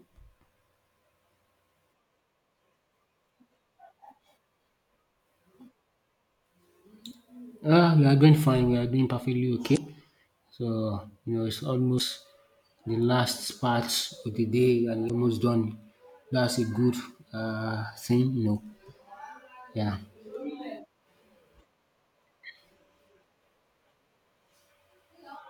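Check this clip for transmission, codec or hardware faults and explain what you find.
The speech has one fault type, damaged data in a compressed stream, at 9.73–9.77 s, 11.97–12.01 s and 15.06–15.11 s (the last right after "of the day and"). Corrupted bytes make the decoder misread frames and resynchronise, giving brief chirps, squawks, clicks or short holes of roughly 40–50 ms each.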